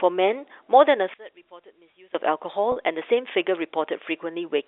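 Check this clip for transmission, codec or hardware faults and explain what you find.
Two faults are present in this speech clip, which travels over a G.711 telephone path with its narrow band of about 300 Hz to 3.6 kHz.

From 1.14 to 2.15 s, the speech drops by about 23 dB. It turns faint. The likely cause is one channel inverted. One stereo channel has flipped polarity. When the two channels are summed to mono, everything common to both cancels. Only their small differences survive, so the voice nearly vanishes for about a second.

From 2.72 to 2.76 s, there is packet loss with pitch repetition. About 40 ms of audio went missing, which fits two lost 20 ms packets. The receiver filled the gap by repeating the last pitch period and fading it down. The gap is short, so there is no silence. Instead the speech holds briefly on a slightly buzzy, sustained tone. Then it resumes.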